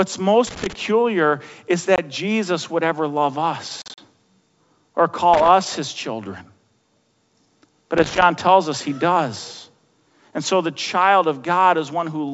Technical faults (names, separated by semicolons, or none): loose connector crackle; packet loss on an ADPCM call